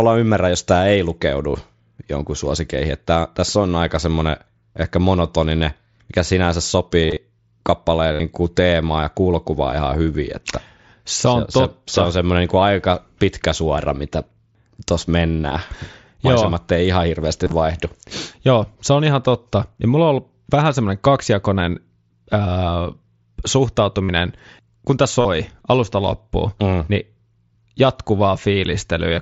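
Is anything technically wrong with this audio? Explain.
Yes, there's concealed Bluetooth headset packet loss, five times: around 7.03–7.17 s right after "ehkä monotoninen mikä sinänsä", 8.13–8.20 s, 17.44–17.52 s after "ei ihan", 24.04–24.09 s, and 25.21–25.25 s between "kun tämä" and "alusta loppuun mm niin". Packets from the headset dropped, and the phone filled each gap by repeating the best-matching recent stretch of waveform. You hear brief buzzy, held tones covering roughly 40 to 80 ms of lost audio per event, with a slight warble as real sound resumes, all through the mSBC headset link.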